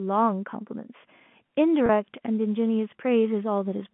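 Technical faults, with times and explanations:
1.86 to 1.89 s, packet loss with pitch repetition: about 30 ms of audio drops out, consistent with a single lost packet. The receiver fills the gap by repeating the last pitch period, so the sound briefly holds with a slight buzzy, sustained quality before normal G.711 telephone-band audio resumes.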